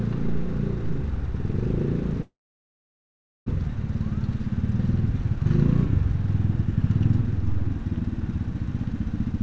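From 2.22 s to 3.50 s the sound breaks off in what is likely a long network dropout. The last sound trails briefly into a fading buzz or hiss, then goes quiet for about 1.15 s. When the audio returns, roughly a second of it is gone, unlike a short glitch that only smears a few milliseconds.

From 7.27 s to 8.39 s a jitter buffer speed-up trims short pitch-period slices to shed about a tenth of a second of built-up delay. The sound runs about 9% faster at unchanged pitch, which is why it seems hurried rather than chipmunk-like. Throughout, the G.722 call codec leaves nothing above 8 kHz.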